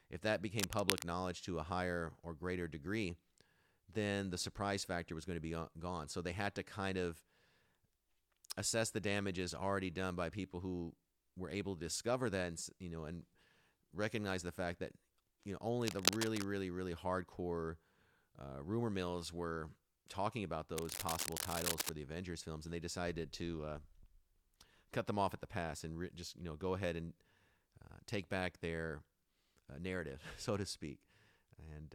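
A worn cable or connector being moved is the likely cause of three bursts of cable scratch noise in this speech. Its shifting contact resistance adds dense, uneven scratching roughly as loud as the speech: from 0.58 to 1.04 s after "if that", from 15.82 to 16.44 s after "fact that you know", and from 20.77 to 21.90 s after "mills were talking about".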